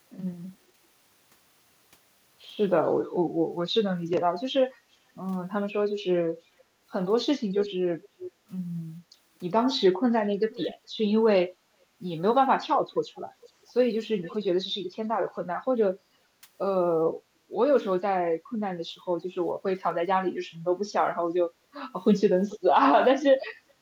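At 4.73 to 4.84 s the room background dips by about 8 dB for a brief moment. This is background gated by the echo canceller: while the far-end loudspeaker played, the canceller pulled the microphone down hard, then released it. On a waveform the noise floor between phrases visibly narrows. On a spectrogram a faint vertical band of reduced background energy appears across all frequencies.

Six short stretches of echo leak follow: 7.61 to 8.3 s, 10.51 to 10.76 s, 12.92 to 13.5 s, 14.22 to 14.37 s, 22.49 to 22.6 s and 23.35 to 23.45 s. Each is a faint repeat of the speech arriving about 420 ms late, with the delay creeping to about 430 ms by the end. It sits well below the direct sound, roughly 15 to 25 dB down. Its likely cause is a loudspeaker-side canceller leaving residue that was sent back. A spectrogram shows ghostly copies of the harmonic patterns offset in time, and the waveform shows small trailing bumps after the phrases.

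From 23.56 s to the end of the clip, the background is gated again, dropping by about 12 dB for about a third of a second. On a spectrogram this shows as a wider dark gap in the noise floor.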